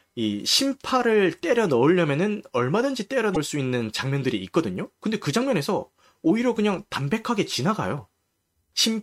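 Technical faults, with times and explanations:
3.33 to 3.37 s, damaged data in a compressed stream: a short stretch of the encoded speech arrived corrupted, so the decoder could not read those frames correctly and lost its place in the stream. It then had to hunt for the next valid frame header before normal decoding could resume. For about 40 ms the speech is disrupted.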